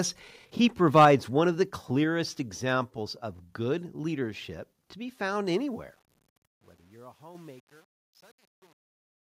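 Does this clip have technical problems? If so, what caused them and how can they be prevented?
Yes. Microphone overload: input gain was likely set too high, so peaks from 0.95 to 1.11 s exceed full scale by about 5 dB and turn harsh and crackly. Prevent it by setting input gain with headroom below the loudest peaks.

Microphone volume stepped down: call software likely reacted to loudness and cut device gain, dropping everything about 2 dB at 1.05 s and about 3 dB at 2.04 s. Prevent it by disabling automatic microphone gain control.

Microphone volume stepped up: the software raised device gain at 7.35 s, making sound and background jump about 6 dB together mid-fade. Prevent it by fixing the input level and turning off automatic adjustment.

Truncation distortion on a fade: the fade-out from 5.58 s keeps too few bits, consistent with roughly 9-bit resolution, without dither, so the tail turns gritty from 6.14 s to 9.35 s. 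Prevent it by processing fades at high bit depth and dithering at export.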